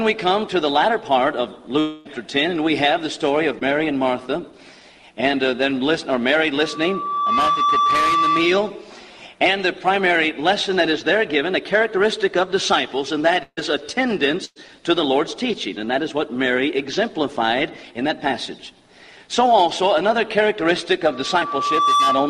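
From 1.79 to 2.07 s the sound is carried on as a fading smear for about a quarter second and resumes further on, likely a long network dropout rather than a short smear. At 3.59 s and 7.51 s, short concealed packet loss causes brief wobbles of a few hundredths of a second. A loudspeaker feedback squeal swells at 1.2 kHz from 6.58 to 8.69 s, building over roughly 0.7 s to about 5 dB above the sound. It is a steady single tone, unlike dropout buzz. Bursts of packet loss at 13.43–13.59 s and 14.45–14.58 s leave fading held sound over 100–140 ms gaps, longer than the wobbles. The squeal returns from 21.10 s to the end, building over about 1 s, with another concealed loss at 21.40 s.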